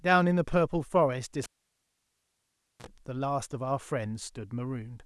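At 1.43 s the speech cuts out with a pop: a cable pulled and plugged back in. There's about 1.38 s of near silence, then roughly 43 ms of 60 Hz mains buzz as the plug tip catches first, and another pop when the sound returns at 2.87 s.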